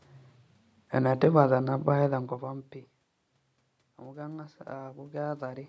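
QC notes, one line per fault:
4.04–5.64 s, automatic gain rising: after the input dropped by about 20 dB, the gain control climbs about 6 dB over 1.6 s, so voice and room noise swell together; the waveform envelope and spectrogram noise floor rise in step.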